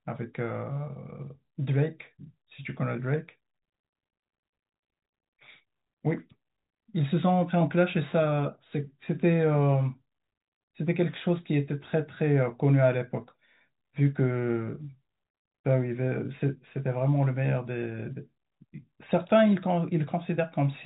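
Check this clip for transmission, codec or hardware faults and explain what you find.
Nothing here points to a transmission, codec or hardware fault, just ordinary G.711 telephone coding doing its usual job, with the speech cut off above about 3.8 kHz the way a phone line would.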